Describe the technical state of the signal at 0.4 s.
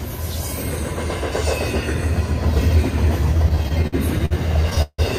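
At 0.4 s the signal is intact, with no audible technical fault at that moment.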